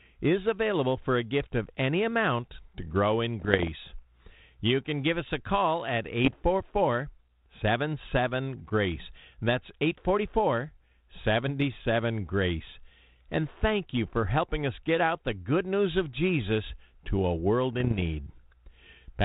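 Pops and short, rough crackling bursts, with the level briefly jumping, break in at 3.40 to 3.68 s just after "amount to grow in", at 6.25 to 6.35 s after "us a call at", and at 17.75 to 18.02 s after "to a world". These are bit errors on an ADPCM link. The telephone-band coding points to 32 kbit/s G.726. Each flipped bit corrupts the decoder's step size and prediction, so the damage rings on briefly instead of clicking once.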